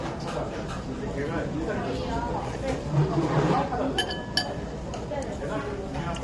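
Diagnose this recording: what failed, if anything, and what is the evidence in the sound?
Codec stage: the whole clip has a rough, grainy texture and nothing above 11.6 kHz, likely from low-delay AAC compression (AAC-ELD) at a low rate, which fits about 32 kbps. Short frames smear fine detail. A spectrogram shows a flat ceiling at 11.6 kHz and noise filling gaps between components.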